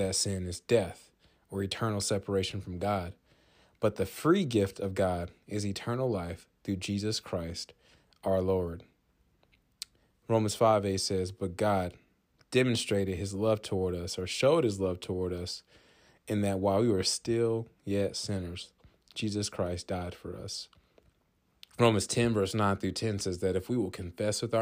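Speech recording with no technical faults detected anywhere in the clip.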